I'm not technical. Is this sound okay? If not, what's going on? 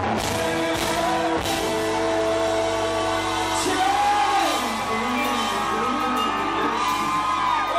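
Yes, nothing in this sound stands out as a technical problem, so there's nothing to fix.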